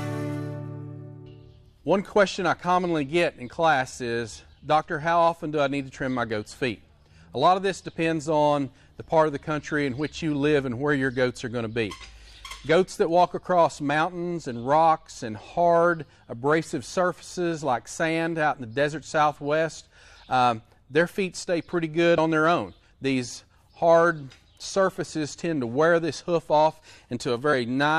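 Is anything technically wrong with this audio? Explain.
Yes. At 22.18 s, compressed frames are skipped: a couple of damaged or missing frames drop out, so the audio jumps ahead about 50 ms, seen as a vertical seam in the spectrogram.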